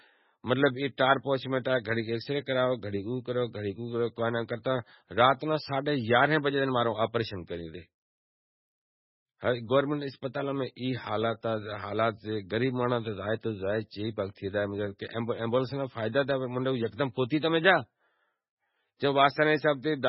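Throughout the speech, nothing survives above 5.6 kHz and weak detail swirls in and out, which points to heavy MP3 compression at a very low bitrate, likely around 16 kbps. Unlike a plain low-pass filter, it adds watery, chirping artefacts and smeared attacks, not just dullness.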